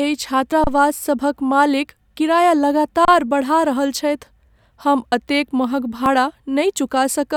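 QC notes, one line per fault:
0.52 s and 6.06 s: dropped buffer (overrun). At each point the speech jumps forward, with no pause between the two sides. Around 40 ms of sound is missing, likely because the input was not read before the hardware overwrote it. The waveform shows an abrupt step discontinuity with no flat gap, and the spectrogram shows a thin full-band vertical line where the harmonics break off and restart mismatched.
0.64–0.67 s and 3.05–3.08 s: underrun with held sample. The output ran dry for 30 ms each time, and the converter held its last value, so the sound simply stops with almost no click. Nothing was lost: playback resumes exactly where it paused, so the return is soft too. On the waveform this is a flat horizontal segment. On the spectrogram it is a blank 30 ms column, with only faint edges at either end.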